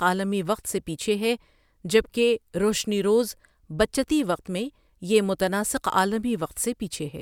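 No technical faults can be heard anywhere in the recording, and the speech signal holds steady throughout.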